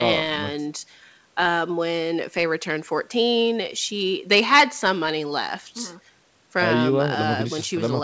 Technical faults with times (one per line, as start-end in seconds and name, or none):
none